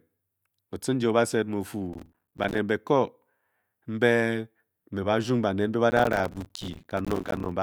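From 1.93 to 2.58 s, and again from 5.90 to 7.52 s after "mbe ba", there is processor overload crackle. The processor keeps missing its deadlines for short buffers of about 5 ms. Each miss drops in a brief silent gap, and the many gaps blend into a harsh, gritty tearing over the speech.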